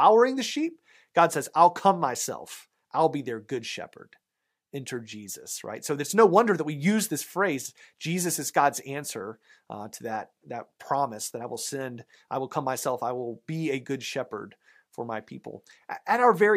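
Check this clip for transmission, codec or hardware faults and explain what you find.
No faults can be heard anywhere in this speech recording. There is nothing to report in any of the areas the check covers.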